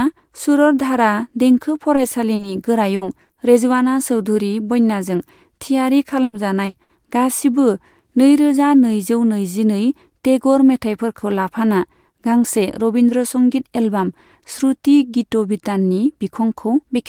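Short concealed packet loss first appears at 1.95 s, where 20 ms of speech is missing. Two more follow back to back from 2.35 to 2.45 s, 40 ms and then 20 ms. The decoder stretched the preceding sound across each hole and then rejoined the real signal. Each gap is a brief smear or wobble.

A burst of packet loss runs from 2.95 to 3.03 s, with 60 ms gone in one stretch. The last sound is extended and fades as the gap goes on, giving a short held buzz or dying hiss. Speech then resumes with that piece missing.

Short concealed packet loss returns at 3.25 and 3.33 s, 40 ms each. These two patches sit close together. The pair sounds like a quick double wobble.

Repeated packet loss, with a robotic sound, spans 6.23 to 6.91 s. It begins right after "चौधरी बन्याजों थियारि" and ends before "गासिबो नै रोजा नैजौ". Four separate gaps total 220 ms, about a third of the stretch, and the longest is 100 ms. 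Each hole is patched before the next arrives. The passage turns choppy, with fragments dropped.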